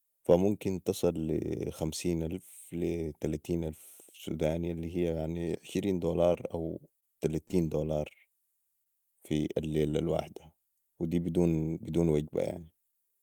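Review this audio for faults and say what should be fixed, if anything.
Scattered short gaps show up twice in the speech: from 6.33 to 7.55 s, right after "الي هيا يعني عشرين", and from 8.84 to 9.95 s, just before "الواحده ودي". A few packets went missing or arrived late, and the receiver covered each little hole by stretching the last bit of sound. That's what makes those brief ticks and smeared hiccups. The holes are small, no more than about 20 to 30 milliseconds each. A deeper jitter buffer and a steadier network path would prevent it.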